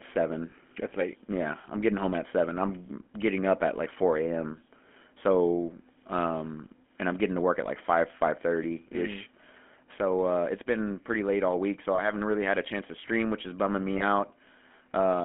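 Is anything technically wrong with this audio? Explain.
Yes. Throughout, the speech sounds buzzy and gravelly, confined to roughly 200 Hz to 3.4 kHz. This is GSM full-rate codec damage: the vocal tract is modelled and driven by sparse regular pulses, which fits a 13 kbps stream.

At 0.50 to 0.53 s, 11.96 to 12.02 s, and 13.98 to 14.03 s, brief rough metallic rings appear. These are lost GSM frames, each about 20 ms, which the decoder papered over by repeating the previous frame's settings.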